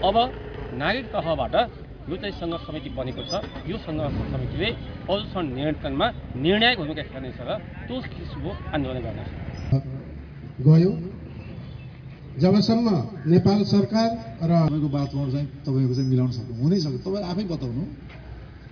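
Nothing here calls for a note, since the audio runs along without any glitch, dropout or distortion catching the ear at any point.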